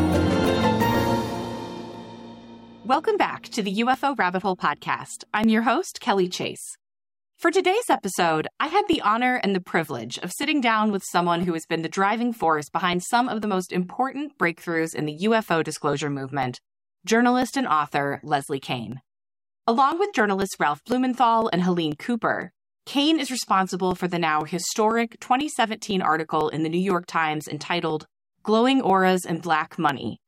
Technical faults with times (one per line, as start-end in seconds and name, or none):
0.45-29.89 periodic USB or driver dropouts